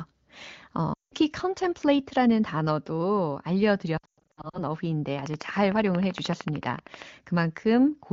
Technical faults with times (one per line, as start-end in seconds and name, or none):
0.94-1.14 lost AMR speech frames
3.97-4.61 lost AMR speech frames
5.19-7.03 train of clicks